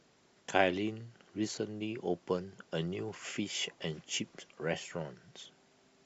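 At 1.56 to 1.58 s, lost LE Audio frames leave a brief gap of about 15 ms, consistent with two missing frames. The LC3 decoder covers it by replaying the last spectrum with randomised signs, so the sound blurs into a short noisy smear. On a spectrogram, harmonics become a diffuse vertical patch, and the waveform shows a noise-like burst.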